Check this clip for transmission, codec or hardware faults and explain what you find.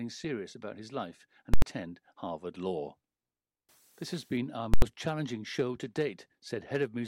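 Two hits of invalid numbers at full scale in this speech. The first runs from 1.54 to 1.62 s, right after "about his life and"; the second from 4.74 to 4.82 s, between "has been our" and "challenging show to". Each lasts about 85 ms, which fits a 4096-sample processing block. A calculation blew up to infinite or invalid values that got clamped to maximum level, so the output is pinned flat at one extreme value, far beyond the speech peaks. You hear a loud pop going in, silence through the block, and another pop coming out.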